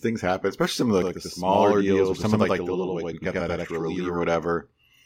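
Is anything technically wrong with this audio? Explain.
Yes. From 1.02 to 4.23 s, right after "happen especially some of", there's channel delay doubling: one channel runs about 93 ms late, which fits a 4096-sample buffer. Summed to mono, it gives an equal-level slap echo.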